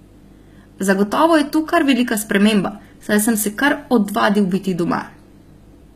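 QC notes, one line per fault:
Throughout: HE-AAC compression. The speech has plainly audible codec damage and nothing above 14.9 kHz. The treble sounds bright but synthetic, with s sounds gritty and lispy. This is likely spectral band replication copying lower bands upward, which fits a bitrate near 20 kbps.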